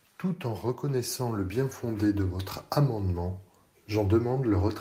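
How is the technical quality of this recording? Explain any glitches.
The recording has one clear fault. From 0.21 to 2.58 s, automatic gain rising: the gain control judged the input too quiet and stepped its level up by about 7 dB over those two-plus seconds, so the speech and the background noise swell louder together.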